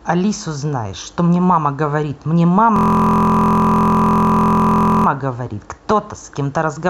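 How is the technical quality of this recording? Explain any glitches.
One glitch mars the recording. From 2.76 to 5.06 s, a system hang loop repeats a 23.2 ms slice, which fits a 1024-sample buffer, as a steady 43 Hz buzz.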